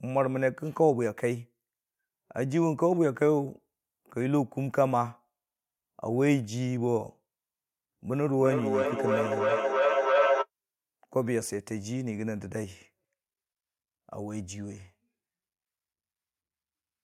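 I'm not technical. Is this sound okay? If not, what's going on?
No. From 8.33 to 10.48 seconds there is feedback howl. Two devices in the same room were likely on the call together, so one device's loudspeaker fed the other's microphone, and the sound went round that loop, getting louder each trip. What you hear is a mid-pitched tone, roughly 500 Hz, that swells until it's about as loud as the speech, before it stops.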